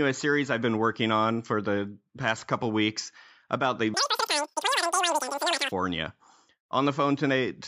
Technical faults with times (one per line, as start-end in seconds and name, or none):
3.94-5.72 wrong sample rate